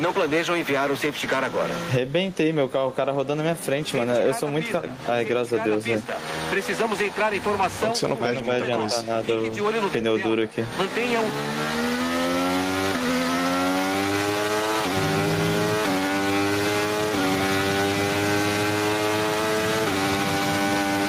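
Gain pumping runs through the whole clip, with the gain swinging by around 20 dB, likely from input gain set far too high feeding a fast limiter.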